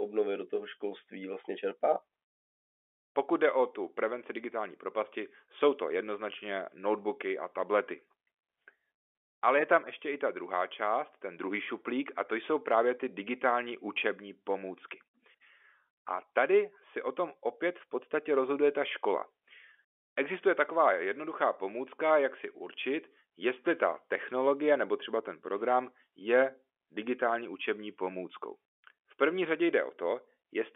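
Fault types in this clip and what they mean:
No faults can be heard anywhere in this speech.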